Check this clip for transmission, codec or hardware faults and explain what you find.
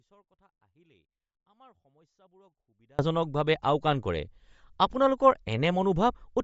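Two faults are present: a dropout at the start and codec damage running through the whole recording.

From the first moment until 2.99 s, an audio dropout to a faint residue is already under way. The wanted signal has likely been lost, but the path stays live, leaving only faint sound roughly 35 dB below the normal signal level. At 2.99 s the speech jumps back abruptly, with no fade. On a waveform this shows as a near-flat trace followed by a sudden full-height envelope.

Throughout, the speech has a breathy, grainy edge and nothing above 7.7 kHz. This is likely Bluetooth LC3 compression at a low rate, around 32 kbps. The codec strips the upper spectrum and patches it with noise, in blocks that fit 10 ms frames. A spectrogram shows a hard ceiling at 7.7 kHz and speckled, smeared texture beneath it.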